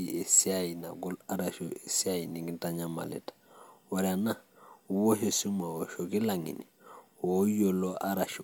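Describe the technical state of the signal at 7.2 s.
At 7.2 s the speech signal is intact, with no audible fault at that moment.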